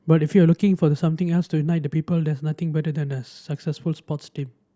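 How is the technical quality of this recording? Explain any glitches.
No technical glitches can be heard anywhere in the recording; the signal stays continuous and intact throughout.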